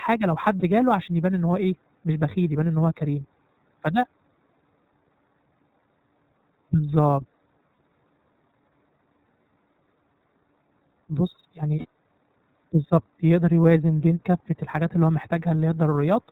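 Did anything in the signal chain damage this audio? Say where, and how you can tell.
Yes. Channel delay (comb filtering) runs throughout the clip at the driver or buffer stage. The speech sounds hollow and phasey, with a fixed gap in the upper spectrum starting near 3 kHz. That fits one channel arriving a fraction of a millisecond late, around 0.15 ms, and the two being summed to mono. Wherever both copies are out of phase they cancel, leaving evenly spaced notches that stay put.

The iLBC codec stage is plainly audible for the whole clip. Nothing passes above 4 kHz, and the speech has the slightly rough, synthetic texture of excitation coding done one block at a time. The block rhythm and the texture point to 30 ms frames, which fits the 13.33 kbps mode. Each frame is rebuilt without help from the one before it, so the result is grainy even though the speech stays intelligible.

Sample clock jitter at the converter adds a faint hiss that rides on the speech throughout, roughly 45 dB below the signal. 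It rises on loud, bright passages and disappears in the pauses. An unstable converter clock takes each sample slightly early or late, on the order of a couple of microseconds. The error scales with how steeply the waveform is changing, which is why it follows the high, energetic parts of the signal.

Lost iLBC frames at the network stage cause brief held, buzzy fragments at 0.59 to 0.63 s, 7.75 to 7.77 s and 11.79 to 11.85 s. The first two sound like about 30 ms of concealment each, consistent with one missing frame. The last is about 60 ms, which suggests two. The decoder filled each gap by repeating the last pitch cycle mixed with noise. Because iLBC frames stand alone, clean decoding returns right after each gap.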